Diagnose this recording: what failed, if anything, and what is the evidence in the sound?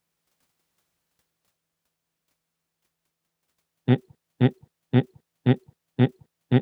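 From 4.15 s to the end, the speech becomes a broken-record loop: one 0.53 s fragment plays five times, back to back. Playback or the stream likely stalled and kept re-sending its last buffer, so the real audio is lost. Waveform and spectrogram show identical tiled blocks.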